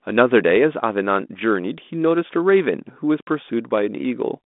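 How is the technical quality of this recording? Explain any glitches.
No glitches turn up anywhere in the recording. The speech has come through a G.726 ADPCM telephone link at 32 kbit/s, heard as a line band of roughly 200 Hz to 3.6 kHz with nothing above 3.8 kHz and only light codec roughness.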